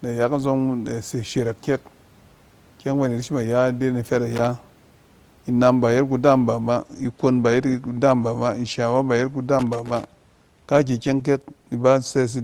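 Speech, marked by two bursts of loose connector crackle. The first runs from 4.35 to 4.45 s. The second runs from 9.59 to 10.07 s. A worn or dirty contact is making and breaking, chopping the signal into an irregular burst of crackle or scratching.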